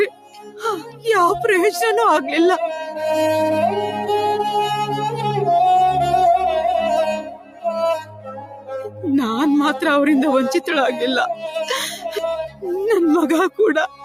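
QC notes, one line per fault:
Throughout: noise suppressor applied to music or sounds. A speech-tuned suppressor is still in the chain, and it keeps treating steady tone, ambience and reverb as noise to pull down. Level swings by about 10 dB as it clamps and releases, so the sound pumps and thins. Sharp onsets get past it fairly intact, but anything sustained or decaying sinks underneath them, which is why the body of the sound keeps wobbling.
0.09–0.64 s, 0.8–1.05 s, 7.22–7.7 s, 8.01–9.04 s, 12.48–12.64 s, 13.88 s to the end: sound cut by the noise suppressor. In these stretches the suppressor decides the material is noise and ducks it harder than elsewhere. The first and third dip about 16 dB, the fourth (the longest, about a second) about 13 dB, the last two about 12 dB, and the one at 0.8 s about 10 dB. You hear held sound and tails collapse or get chopped short while anything transient pokes through.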